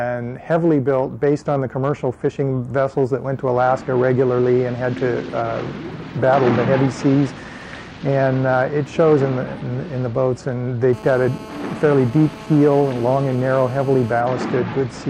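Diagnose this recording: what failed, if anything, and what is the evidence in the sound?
A hard, raspy buzz cuts in at 10.93 s and holds steady until 14.21 s, pitched at about 217 Hz with a dense stack of harmonics and sitting about 18 dB below the programme, with no relation to the sound itself. This is GSM phone buzz, picked up in the analogue wiring: a nearby 2G handset on a call transmits bursts 217 times a second, and the audio circuitry rectifies those radio pulses into audible interference. The steady character fits a call rather than a data transfer.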